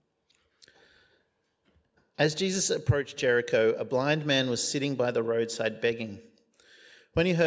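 No technical faults can be heard anywhere in this recording.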